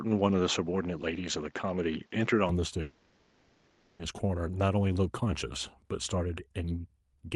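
From the start to 2.49 s the speech sounds slightly dull and closed-in, then opens up with no gap and no jump in loudness. This is most likely an input switched to a poorer device: the first microphone passes nothing above 7.3 kHz and adds a faint noise floor of its own, roughly 35 dB under the speech. On a spectrogram the top band sits empty until 2.49 s, after which energy reaches higher.

From 2.81 s to 4.01 s a long network dropout removes 1.18 s of speech. The whole gap is filled with a continuation of the last sound, a buzzy, hissy smear that fades rather than going silent, and speech then resumes with that stretch missing. Lost packets are the likely cause. The waveform shows a decaying, featureless envelope there, and the spectrogram shows frozen, blurred harmonics instead of changing speech patterns.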